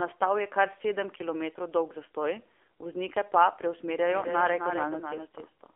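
Speech clip, carried through the AMR narrowband mobile codec for its whole length. The band runs only from 300 Hz to 3.5 kHz. The voice sounds buzzy and synthetic, with plainly audible codec damage. That degree of damage points to a low AMR-NB mode near 7.4 kbps. From 4.11 s to the end, a doubled audio track appears. A second, full-band copy trails by about a third of a second, around 5 dB quieter. It enters abruptly and has no room decay. It is likely a second capture path or an edit holding two copies out of step.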